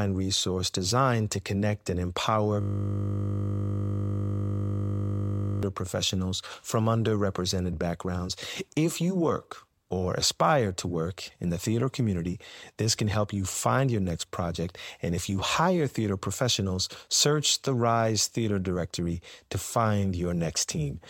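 Speech, interrupted by a system hang loop from 2.61 to 5.63 s, after "to connect and empower": a frozen driver left one 20 ms slice cycling, heard as a steady 50 Hz buzz rather than a stutter, until "professionals from underrepresented backgrounds".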